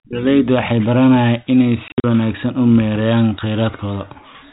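Between 1.88 and 2.04 s, packets were dropped and the receiver inserted silence for them: packet loss filled with silence. About 120 ms of speech vanishes across those 160 ms, in gaps fitting 20 ms packets, the longest 60 ms, each hard-edged against the 4 kHz-limited telephone sound.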